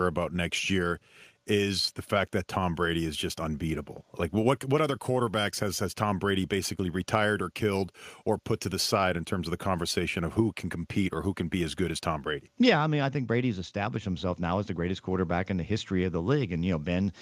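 No technical faults can be heard at any point in the speech.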